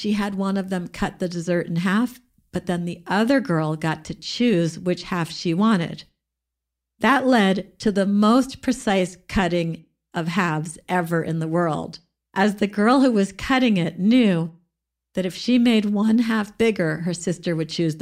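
No technical faults are audible.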